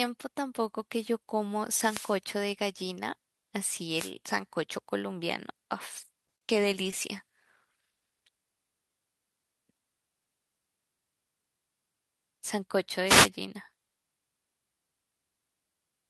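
At 1.73 to 2.20 s and again at 3.94 to 4.12 s there are wireless microphone noise hits. The analogue FM link from the radio microphone briefly faded as reflected paths cancelled the carrier. Receiver hiss rose over the speech and was heard as a short swish of static. Both lasted under half a second.

From 6.27 to 6.43 s there is a cluster of short concealed packet losses. The decoder received no audio for about 10 to 20 ms at a time, with gaps at 6.36 to 6.38 s and 6.38 to 6.42 s running back to back. Further single dropouts follow at 6.91 to 6.93 s, 7.18 to 7.20 s and 7.43 s. Each hole was bridged by extrapolating the preceding sound and crossfading back. The result is a run of brief smears and wobbles through that stretch of speech.

At 13.05 to 13.30 s a third wireless microphone noise hit occurs. It is another quarter-second fade in the radio link that brings up a burst of receiver static.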